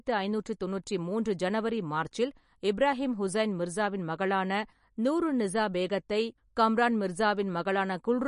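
MP3 compression throughout: nothing above 10.6 kHz, and the speech sounds watery and swirly, likely from an encoder starved of bits, fitting about 40 kbps.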